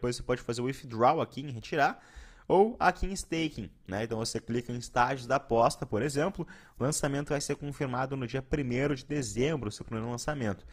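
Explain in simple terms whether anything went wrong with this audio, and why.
Something did go wrong. At 3.36 s the sound suddenly gets worse and stays that way to the end, with no gap. That's an adaptive stream at a lower bitrate: the connection slowed, so the player switched to a lighter version, and compression artefacts rise.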